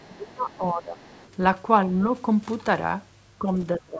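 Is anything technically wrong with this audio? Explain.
Yes. Other side's voice leaking through appears at 0.0 to 0.16 s and again at 1.01 to 1.36 s. A faint second voice, roughly 30 dB below the main speech, sits under the talker. This is likely loudspeaker playback that the echo canceller failed to fully remove from the microphone.

Speech suppressed in double talk occurs at 0.07 to 1.01 s, 3.39 to 3.47 s and 3.78 s to the end. The talker's voice sinks by up to around 25 dB in the first stretch, only slightly in the second, and about 20 dB at the close. The canceller apparently treated overlapping speech as echo and attenuated it.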